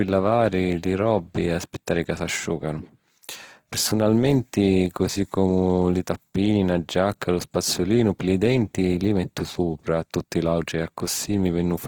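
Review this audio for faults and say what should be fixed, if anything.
Opus compression damage is plainly audible throughout the speech: voiced sounds carry a rough, grainy, noise-like texture rather than clean harmonics, and upper bands sound filled in rather than missing, while the bandwidth still reaches about 20.2 kHz. The likely cause is Opus in its music (CELT) mode starved of bits. It keeps each band's energy but substitutes folded or noise content for detail, which fits a rate near 16 kbps. Prevent it by encoding speech at a higher Opus bitrate or in its speech-oriented mode.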